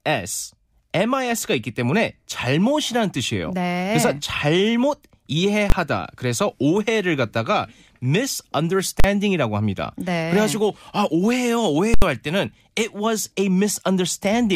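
At 5.70–5.72, 9.00–9.04 and 11.94–12.02 s, invalid numbers at full scale pin the output at its limit, giving sudden loud bangs, not the flattened-peak distortion of clipping.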